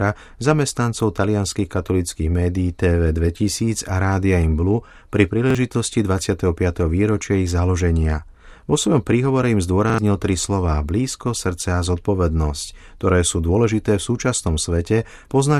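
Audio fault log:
5.50–5.55 s, repeated buffer: a roughly 43 ms chunk plays twice back to back with a hard seam at the join, giving a quick stutter. The new audio didn't arrive in time, so the device replayed its last block, which fits a 2048-sample buffer; around 40 ms of the real audio is gone.
9.90–9.98 s, repeated buffer: right after "svojom príhovore im" the same block sounds three times, a longer stutter before "tri slová blízko srdce", losing about a tenth of a second.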